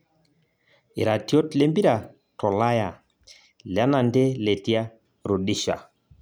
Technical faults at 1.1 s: none

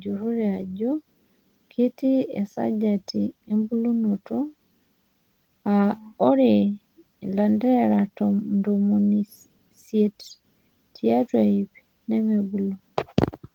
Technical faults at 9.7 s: none

